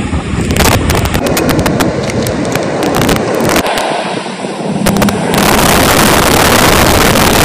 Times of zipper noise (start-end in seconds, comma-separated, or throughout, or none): none